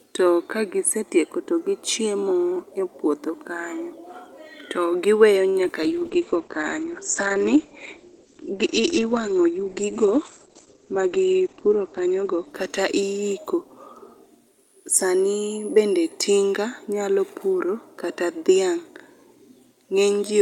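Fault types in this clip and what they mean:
Short stall from a late packet: A packet arrived late and the jitter buffer ran dry. From 5.49 to 5.57 s the receiver held the last sound for 52 ms, then resumed where it stopped. No speech is lost, but one sound drags briefly.
Short concealed packet loss: Around 5.65 s, 20 ms of speech never reached the decoder in time. The receiver patched the gap by extending the preceding sound, then blended back. It comes across as a quick smear or wobble, and a brief consonant may disappear.
Call bitrate drop: From 5.85 to 15.33 s the encoder's bitrate falls from 64 to 11 kbps and stays at its lowest for 5.96 s. The audio bandwidth shrinks from 20 kHz to 8 kHz, so the speech turns muffled, coarse and watery.
Jitter buffer speed-up: Excess audio had built up in the buffer. From 10.65 to 11.10 s the receiver trimmed small pitch-period slices, about 50 ms in total, playing at 109% speed. 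The pitch stays the same, but the speech sounds briefly rushed.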